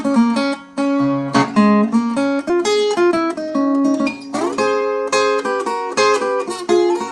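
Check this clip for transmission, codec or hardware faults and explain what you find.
Two transmission faults show up here.

At about 2.49 to 2.51 s there's a skip ahead. Roughly 0.7 s of audio was dropped, in transit or by an overflowing jitter buffer, while later audio was already queued. Playback jumps straight across with no gap, so the two sides butt together abruptly.

Right after, from about 2.58 to 4.82 s, there's a jitter buffer speed-up. The buffer was holding more than its target, so the receiver trimmed short pitch-period-sized pieces repeatedly, around a third of a second in total. The audio runs at 114% speed with unchanged pitch and sounds hurried.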